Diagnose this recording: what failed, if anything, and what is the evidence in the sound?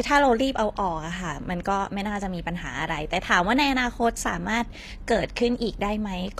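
The failure is at the codec stage: the recording was likely passed through HE-AAC compression, and the treble damage, audible across the whole speech clip, fits a low bitrate of around 24 kbps. Only the lower spectrum carries real coded detail; the upper band is synthesised by copying lower bands upward and shaping them with a coarse envelope. The top stays bright but inauthentic, its harmonics misaligned with those below, so s sounds come out gritty, metallic and lispy.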